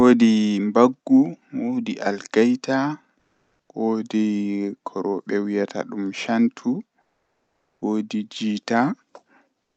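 Comfort noise replaces the background from 3.19 to 3.69 s, about 5 dB louder, and from 7.01 to 7.81 s, about 4 dB quieter. Steady, featureless hiss stands in. Opus DTX is the likely cause.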